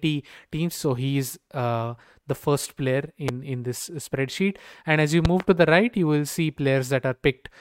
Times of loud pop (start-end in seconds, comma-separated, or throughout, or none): 3.28-3.31, 5.25-5.43